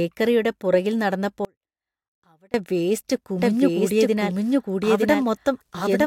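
At 1.45 s the speech drops out abruptly, and until 2.54 s, about 1.09 s, only a faint residue remains, roughly 30 dB below the normal level. This is an audio dropout to a faint residue. The likely cause is that the wanted signal was lost while the path after the break stayed live, so only faint sound carries through the gap. Both edges are hard cuts, not a pause or a fade.

From 3.39 s to the end of the clip, the speech is heard twice. A second full-band copy at roughly the same level trails the first by about one second. This is a doubled audio track, likely caused by the same audio being captured again through a slower path, or by an edit holding two copies out of step. The copy enters abruptly and has no decay or room colour, so it reads as a clean overlapping repeat rather than an echo.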